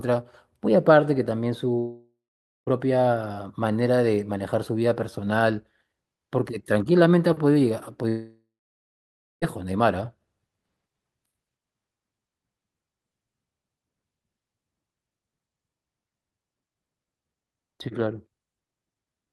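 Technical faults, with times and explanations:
1.79 to 2.69 s and 8.09 to 9.44 s, long network dropout: the stream most likely stopped delivering audio for about 0.88 s and then about 1.34 s. The receiver stretches the last sound into a fading buzz for roughly the first few tenths of a second, then falls to silence for about 0.51 s and 0.95 s respectively. The speech resumes afterwards with the lost stretch simply gone.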